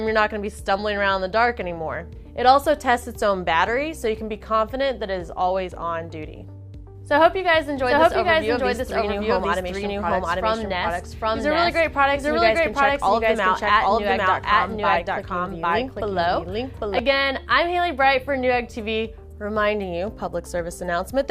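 From 7.21 s to 16.99 s, a doubled audio track appears. A full-band copy trails the original by about 0.7 s, at roughly equal loudness. It has no decay or room colour. Both ends switch abruptly. A slower second capture path is the likely cause.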